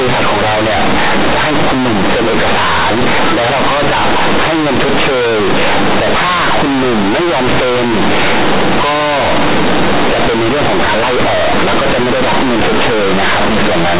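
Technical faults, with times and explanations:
Throughout, companded audio read as linear: the speech was coded as mu-law G.711 but its bytes are played as plain 8-bit samples with no expansion. Every sign change throws the output across roughly half its range, so soft and loud passages come out almost equally large and the waveform is bent. The result is harsh, very loud buzzing, with heavy noise filling the pauses. Simple clipping would flatten only the peaks and leave the pauses quiet.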